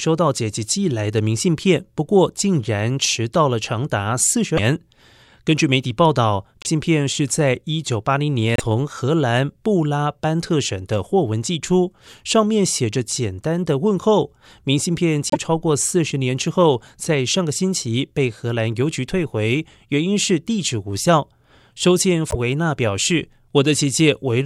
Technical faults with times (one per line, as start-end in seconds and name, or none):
4.56-4.59 broken MP3 bit reservoir
6.62-6.67 broken MP3 bit reservoir
8.56-8.61 broken MP3 bit reservoir
15.30-15.37 broken MP3 bit reservoir
22.30-22.35 broken MP3 bit reservoir